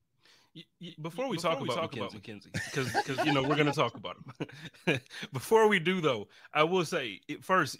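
From about 0.88 s to 3.60 s there's a doubled audio track. The speech is heard twice, with a second full-band copy trailing around 300 ms behind and sitting roughly 5 dB under the original. It sounds like a clean slapback with no room tail, and it switches in and out abruptly, starting just before "to talk about". The likely cause is the signal being picked up again through a slower path, or an edit that left two out-of-step copies stacked together.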